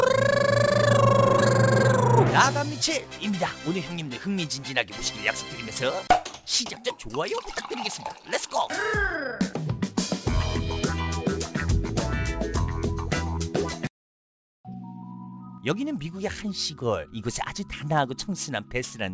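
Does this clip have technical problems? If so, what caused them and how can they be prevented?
Yes. Throughout the clip, the high end sounds gritty and metallic, with harsh tones that do not follow the pitch of the material and a spectrum that runs hard up to a ceiling at 8 kHz. This is aliasing. The pattern points to a conversion from 44.1 kHz down to 16 kHz with no anti-aliasing filter, so content above the new 8 kHz limit folded back into the audible band, sitting roughly 20 dB below the signal. To prevent it, low-pass filter below the target Nyquist frequency before resampling, or use a proper band-limited resampler.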